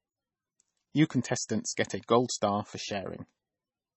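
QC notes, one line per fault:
Throughout, MP3 compression: nothing above 8 kHz, with a watery, swirly texture. Likely a heavily starved encoder, fitting a bitrate near 20 kbps.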